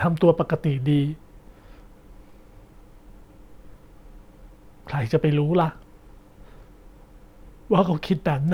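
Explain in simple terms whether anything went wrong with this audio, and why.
Nothing went wrong here.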